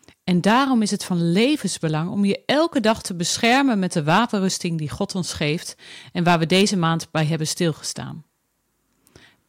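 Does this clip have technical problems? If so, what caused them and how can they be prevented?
Yes, hard clipping on the speech at 0.31–0.64, 2.31–2.92, 3.44–3.60, 3.97–4.19 and 6.27–7.22 s. Peaks overshoot by about 4–9 dB, get sliced flat and crackle. Leave more headroom when setting gain.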